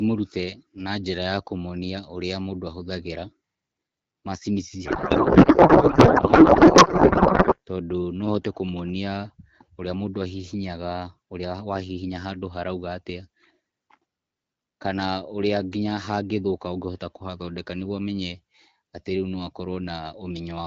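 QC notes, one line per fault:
4.85–7.58 s, codec payload misread: the receiver unpacks the AMR frames in the wrong layout, which fits octet-aligned packing read as bandwidth-efficient, so every field is misplaced. After "macini ici" the speech becomes garbled, warbling noise that barely tracks it, until "tondũ no hote kũmũonĩa".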